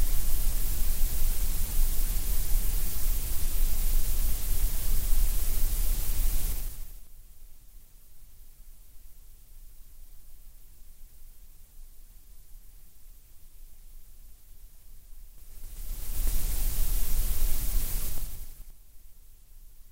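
Level changes were applied in coarse 3 dB steps without smoothing, causing zipper noise: a ticking that rides the sound as it drops by roughly 25 dB at 6.49–7.08 s, rises at 15.32–16.30 s, and drops again at 18.05–18.77 s.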